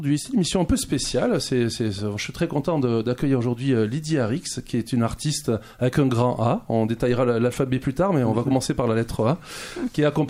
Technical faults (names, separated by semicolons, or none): DC step